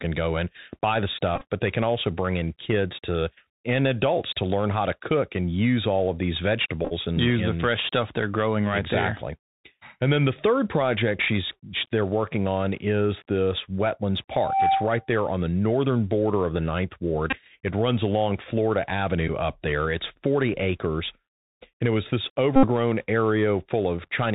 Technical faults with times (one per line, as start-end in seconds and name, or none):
0.00-24.34 Bluetooth CVSD headset codec
1.36-1.45 Bluetooth headset packet repeated
6.85-6.93 Bluetooth headset packet repeated
14.31-15.13 loudspeaker feedback squeal
17.30-17.39 Bluetooth headset packet repeated
19.28 Bluetooth headset packet repeated
22.56-22.67 Bluetooth headset packet repeated